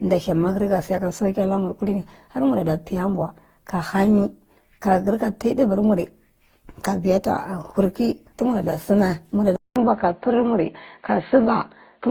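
Generation loss runs through the whole speech clip: the sound is swirly, smeared and hollow beyond what 48 kbit/s Opus alone would give, with blurred attacks, likely from around seven successive decode-and-re-encode passes stacking quantisation noise, though content reaches 20.2 kHz.

An input switched to a poorer device comes at 9.56 s, right after "kurkey tumarada sumae": a 200 ms gap, then dull, narrow sound with nothing above 4.4 kHz and a faint new noise floor roughly 55 dB down, at unchanged level, likely another microphone or a headset's call profile taking over.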